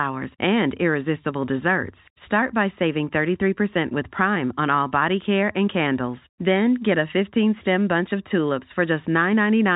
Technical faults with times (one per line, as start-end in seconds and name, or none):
none